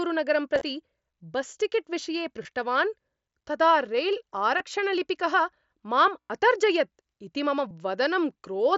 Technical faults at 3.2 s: none

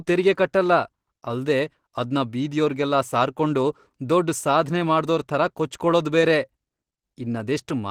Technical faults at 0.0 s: Opus compression

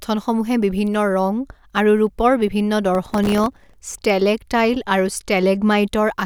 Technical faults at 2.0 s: none

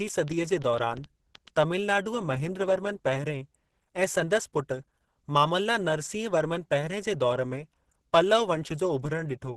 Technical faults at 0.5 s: Opus compression; train of clicks

